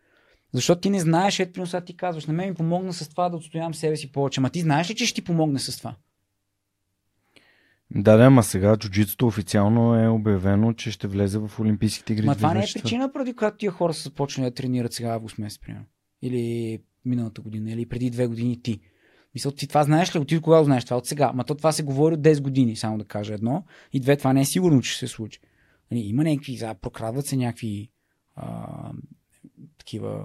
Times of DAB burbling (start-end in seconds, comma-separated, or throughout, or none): none